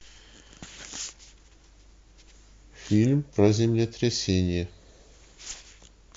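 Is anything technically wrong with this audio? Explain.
No, nothing technically wrong turns up here; this speech recording sounds just fine all the way through.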